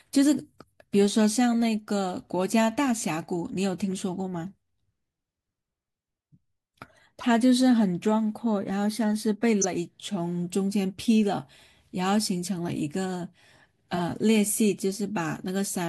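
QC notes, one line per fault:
1.53 s, 7.21 to 7.27 s, 9.62 to 9.65 s and 13.94 to 14.01 s: corrupt frame decoded. The decoder played damaged compressed frames, so misread gains and codes put energy at the wrong frequencies. This produces brief chirps or noise bursts lasting a frame or a few frames. They peak at about -30, -25, -10 and -20 dBFS, so the one at 9.6 s is the loudest.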